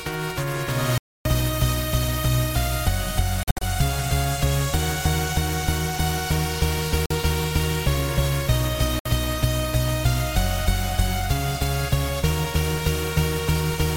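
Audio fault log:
0.98–1.28 s, 3.43–3.63 s, 7.06–7.11 s, 8.99–9.06 s: Bluetooth dropout, likely from late packets being discarded. Sound drops to silence, then resumes further on. The second dropout comes as scattered short holes. On the waveform, flat gaps. On the spectrogram, blank vertical strips.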